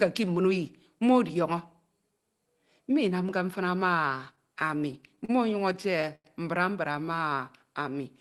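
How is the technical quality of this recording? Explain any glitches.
The recording has two bursts of stutter and one short stretch of slowed playback, heard through a call codec that, likely Opus at around 20 kbps, limits the top end to about 12 kHz and adds its usual coding noise.

Repeated stalls (stutter) occur from 4.35 to 5.31 s and again from 5.73 to 6.26 s, just before "mbra mbra". Packets arrived late, the jitter buffer kept running dry, and the receiver stretched the last sound to cover each gap. The first burst has eight brief gaps of up to 37 ms, about 12% of that span. The second has five, one lasting 92 ms, about 26% of the span. Unlike packet loss, nothing is missing. The sound hitches and catches rather than skipping.

A jitter buffer slow-down runs from 6.93 to 7.35 s, right after "mbra mbra". The buffer was rebuilding its reserve, so it repeated single pitch periods, adding 39 ms and playing at about 92% speed. 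Pitch stays the same while sounds are drawn out. It differs from the stutter because the playback is smooth and stretched, with no repeated hitches.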